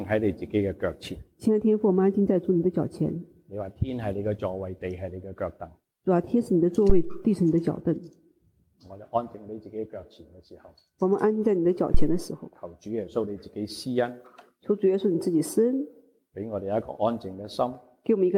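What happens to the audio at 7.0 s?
A phantom power thump hits from about 6.90 to 7.15 s. Phantom power switching on or off on the live input sends a voltage step through the coupling capacitors, producing a deep low-frequency thump that dies away over roughly 57 ms.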